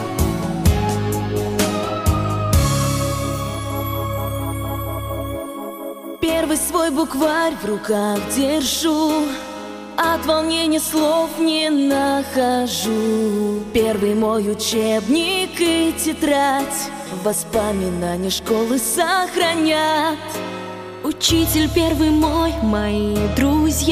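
No technical faults can be heard anywhere in it.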